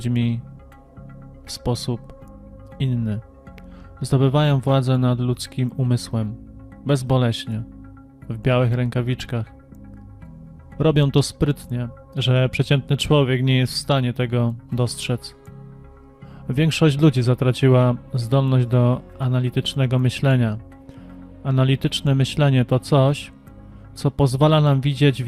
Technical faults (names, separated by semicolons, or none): none